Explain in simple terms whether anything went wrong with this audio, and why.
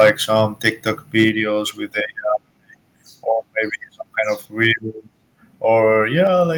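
Microphone overload, at 0.0 to 0.1 s, 1.19 to 1.29 s and 4.62 to 4.71 s: the loudest moments crackle harshly, worst at the start and mildest near 4.7 s. The microphone was likely set too high, so peaks hit the recording limit and got their tops sliced off.

Microphone volume stepped down, at 1.29 s, right before "with a", and at 6.27 s: the whole sound suddenly gets quieter in one jump. The call software likely noticed the overloaded input and turned the microphone down to stop more crackling.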